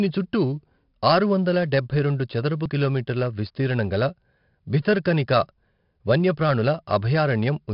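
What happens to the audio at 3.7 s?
At 3.7 s the speech carries 4-bit ADPCM compression, as it does throughout: coarse adaptive prediction steps leave gritty, level-following hiss, and nothing above 5.3 kHz, which fits an 11 kHz sample rate.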